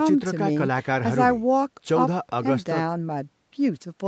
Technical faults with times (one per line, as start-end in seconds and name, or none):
none